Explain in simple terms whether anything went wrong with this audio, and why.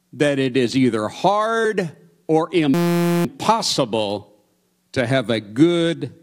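A system hang loop runs from 2.74 to 3.25 s, just after "is either hard or". The computer briefly froze while the sound hardware kept replaying one 5.8 ms scrap of speech, which turns it into a steady buzz repeating 172 times a second.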